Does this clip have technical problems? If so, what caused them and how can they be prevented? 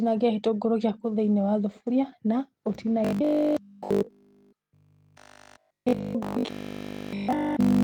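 Yes. From 3.05 s to the end, the speech collapses into robotic sound from repeated short buffers. A rigid 50 Hz buzz sits over everything while the syllables still loosely track the original. A repeat rate of 50 Hz fits a 20 ms stretch being looped over and over, with nearly all of the real audio skipped. The likely cause is new audio arriving too seldom for the playback software, which fills the wait by replaying what it already has. Unlike a simple dropout, there is no silence, only a fixed-pitch metallic drone. Preventing it means fixing the delivery stall, with a larger jitter buffer or a less loaded network and CPU, so real frames arrive on time.

Between 5.97 and 5.99 s, inside that robotic stretch, there is a lost packet rebuilt from error correction. The 20 ms burst sounds grainier and noisier than its surroundings, yet there is no gap, which points to a single packet whose low-bitrate copy in the following packet was decoded in its place. 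That continuity is what separates it from packet loss concealment, which guesses the missing audio and tends to smear or fade. Keeping in-band forward error correction enabled while reducing packet loss on the link keeps these patches rare and brief.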